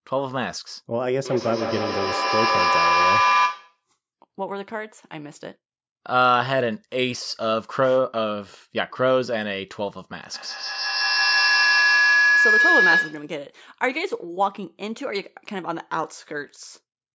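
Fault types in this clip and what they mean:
feedback howl: A tone swells over the speech twice, first near 1 kHz, later near 1.5 kHz, pulsing roughly every 150 ms and peaking about 3 to 4 dB above the speech. Two devices sharing one room and call form a loop that gains level each pass.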